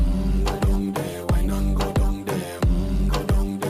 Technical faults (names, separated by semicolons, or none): call bitrate drop